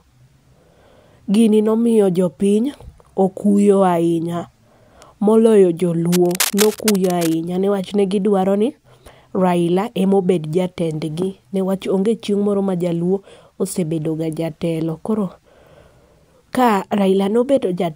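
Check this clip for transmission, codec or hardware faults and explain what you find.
One hardware fault is present. From 6.12 to 7.36 s, cable scratch noise: dense, uneven rustling sits about 10 dB under the speech, likely from a worn connector being moved. Unlike isolated digital clicks, it forms a continuous, irregular burst.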